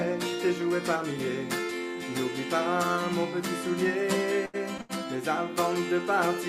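A short stall from a late packet comes at 4.45 s and again at 4.81 s, each lasting about a tenth of a second. Both times a packet arrived late and the jitter buffer ran dry, so the receiver held the last sound for about 82 ms until the data caught up. Nothing is skipped. Playback resumes where it stopped, but the sound hangs slightly too long with a slight buzz or dip, and everything after each stall runs that much later.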